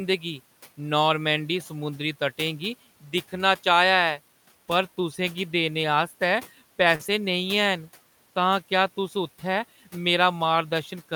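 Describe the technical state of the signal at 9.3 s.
At 9.3 s the signal is intact, with only the room noise sitting about 25 dB below the speech.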